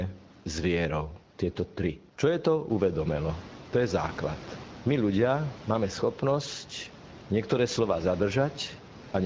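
There are no technical faults to describe in this speech recording.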